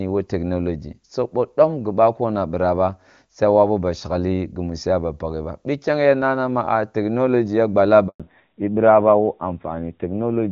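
A handover gap runs from 8.08 to 8.20 s, just after "technology ya". As the call switched networks, no speech frames arrived for 120 ms, so the sound cuts off abruptly and drops to silence until the new link begins carrying audio again.

A fallback to narrowband follows from 8.20 s to the end. The call left the HD Voice path, which before this point sounds like AMR-WB around 23.85 kbit/s, and switched to an older narrowband codec. Nothing remains above 4 kHz, so the sound turns muffled and duller, with a rough grain that fits AMR-NB at 7.4 kbit/s.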